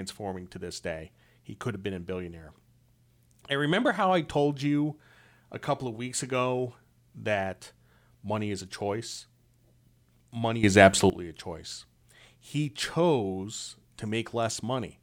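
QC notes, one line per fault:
10.64–11.10 s, sudden gain jump: speech and background noise leap about 13 dB louder together, then fall back, likely from digital gain switched without any ramp.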